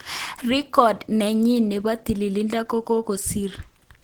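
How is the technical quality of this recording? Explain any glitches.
Compression damage is plainly audible across the whole speech recording. Throughout, the speech sounds hoarse, grainy and muffled. The likely cause is Opus compression in hybrid mode at a rate that fits about 16 kbps, too few bits to code the bands accurately, so the encoder fills them with noise or folded copies.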